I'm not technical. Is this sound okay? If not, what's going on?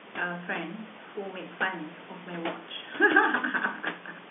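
Yes, nothing stood out on listening; the narrow, phone-like sound and the background noise from the room are what an ordinary telephone line and that room produce.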